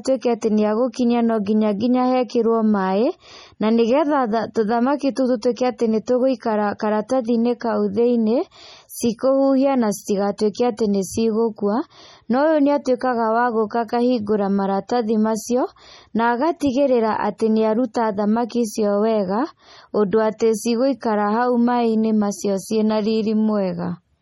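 Throughout the speech, the treble stops dead at 17 kHz and the sound turns watery and swirly, with metallic chirps on s sounds and smeared onsets. The cause is likely heavy MP3 compression, its weak, flickering frequency lines fitting a bitrate near 32 kbps.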